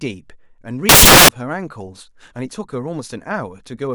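From 0.89 to 1.29 s the speech turns into loud, harsh broadband noise. These are samples built from the wrong bytes. The reader assembles each sample with its bytes misaligned or swapped. The low, fast-changing bits end up as the most significant part of every value. That turns the waveform into near-random hash. After 1.29 s the hiss stops.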